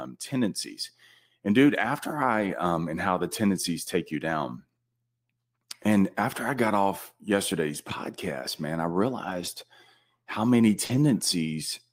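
A speech recording with two kinds of network fault. Lost packets rebuilt from error correction appear at 2.39–2.53 s, after "dude after" and before "um and how the"; at 9.25–9.47 s, after "yesterday's podcast man I"; and at 10.89–10.95 s. In each, the decoder played low-bitrate copies carried in the following packets, roughly 80, 120 and 40 ms of audio, so nothing drops out, but those stretches sound rougher and noisier. A short concealed packet loss sits at 10.85–10.91 s, right after "how many". About 40 ms never arrived, and the receiver extended the preceding sound before blending back into the real signal, which leaves a brief smear there.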